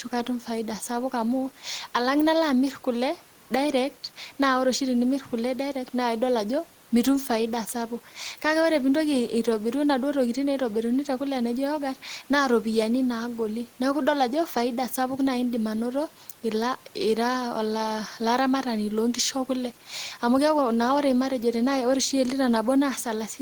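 Nothing in this speech recording points to a technical fault, and the only thing beneath the talking is the room's own background noise, sitting about 31 dB below the speech.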